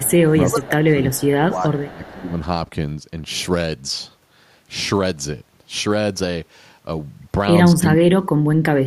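Echo leak, 0.00 to 0.05 s: a faint copy of the speech arrives 378 ms late, about 25 dB below the direct sound. The far end is likely playing the call on a loudspeaker, and its echo canceller let part of the microphone pickup through and back. Speech suppressed in double talk follows from 0.05 to 0.34 s, with the speech dipping by roughly 20 dB. With both sides active, the canceller likely treated the talker as echo and turned everything down. The echo leak returns at 0.36 to 0.61 s, louder at about 20 dB below the speech, and overlaps a second suppression from 0.51 to 1.01 s that is again near 20 dB deep. More leaked echo, still at a 378 ms lag and about 25 dB down, sounds at 1.11 to 1.29 s and at 1.77 to 2.11 s. The second of these sits inside a suppression from 1.44 to 2.35 s, where the speech sinks about 15 dB. The last suppression runs from 7.89 s to the end and is the deepest, cutting the speech by about 40 dB, almost to silence.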